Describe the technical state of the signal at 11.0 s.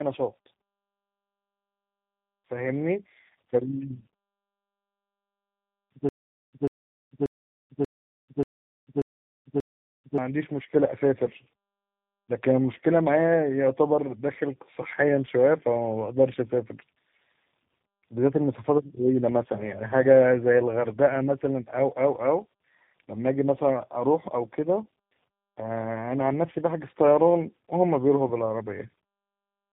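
At 11.0 s you're hearing tandem speech coding, present across the whole clip: the speech sounds like it's been through three speech coders in a row, each re-encoding the last one's damage. That leaves it rough, muffled and warbly, with nothing above about 3.8 kHz.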